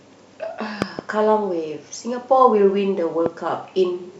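Loud pops strike the speech at 0.82 to 1.01 s, a pair of thumps, then once at 3.26 to 3.28 s, each standing well above the voice. A voltage pulse, likely from a plug, switch or static, was added. Unlike a dropout, the speech carries on underneath.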